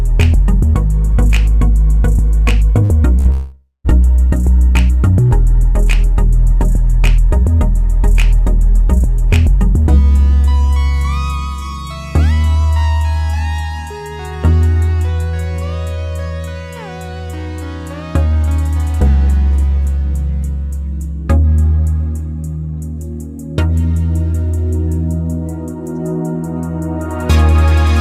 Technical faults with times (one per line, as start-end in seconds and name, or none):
2.83-2.92 burst of packet loss
3.19-3.28 burst of packet loss
3.31-3.87 long network dropout